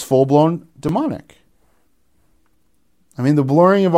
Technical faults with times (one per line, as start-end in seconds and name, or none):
0.88 repeated buffer
2.47 repeated buffer